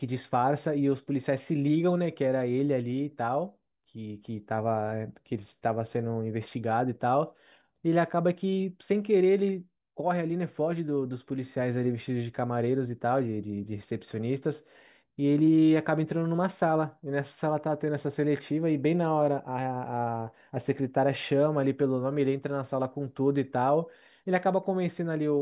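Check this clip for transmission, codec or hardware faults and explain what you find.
No fault can be heard anywhere in this speech recording. There is nothing to report.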